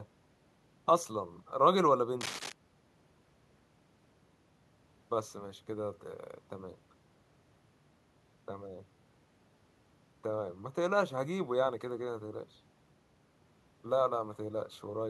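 A worn cable, connector or control was likely disturbed between 2.19 and 2.52 s, so its contact resistance jumped around rapidly for about a third of a second. That erratic contact injects dense, irregular bursts of noise into the signal, producing cable scratch noise: a brief scratching, rustling layer riding over the speech, sitting roughly 10 dB below it.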